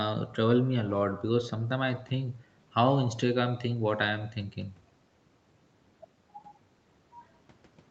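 No technical faults can be heard in this speech.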